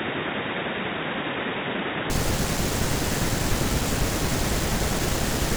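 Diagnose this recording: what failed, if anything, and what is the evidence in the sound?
From the start to 2.1 s the speech is dull and boxy, with nothing above 3.8 kHz, about 5 dB quieter, and sitting over a faint noise floor of its own, then clears with no gap. At the driver stage, the likely cause is an input switched to a poorer device. A codec bandwidth change would not alter noise and level together.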